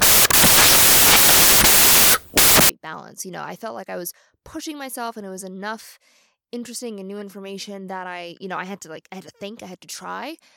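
A speech clip whose opening is wrecked by samples built from the wrong bytes, from the start to 2.69 s. Over that stretch the reader has assembled each sample incorrectly, through a one-byte offset, swapped byte order or a wrong alignment assumption, so the rapidly varying low-order bits land in the most significant position. The result is loud, harsh broadband noise, close to white on the louder sounds.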